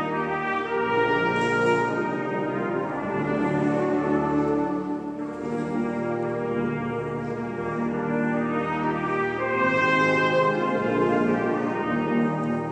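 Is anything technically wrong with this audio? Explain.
No, nothing technically wrong stands out here; the audio sounds fine all the way through, with no problems worth flagging.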